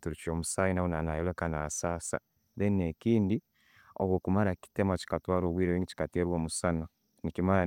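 Nothing in this speech recording points to a technical fault at any point.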